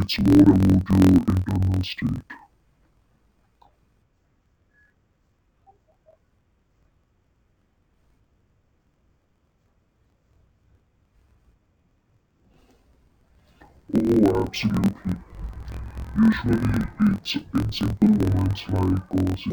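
A speech clip that sounds an octave low, doubled and choppy for its whole length, with a rough flutter at about 43 Hz. This is interleaved audio read as planar: each 23.22 ms block, which fits a 1024-sample buffer, has its alternating left and right samples split into halves, so each half plays at half speed while the overall pace holds.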